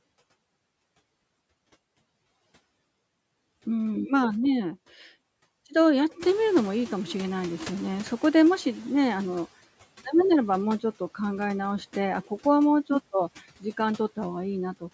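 At about 6.0 s the room noise in this speech clip jumps by about 13 dB, and the noise suppressor catching up is audible from 6.19 s until 9.48 s. Its noise estimate lags the sudden rise, so the noise first passes with less reduction, then sinks by about 10 dB over roughly 3.3 s. Unlike pumping, it fades once in one direction and doesn't swell and duck with the speech pauses. Throughout, the band stops at 8 kHz.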